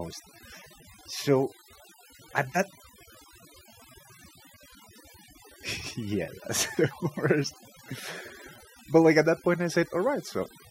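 Throughout, overdone noise removal leaves the speech over a near-silent background flecked with twinkling specks. A noise reducer set too strong switches single frequency bands off wherever they sit near its noise estimate, taking quiet speech detail with them, rather than gating the whole signal.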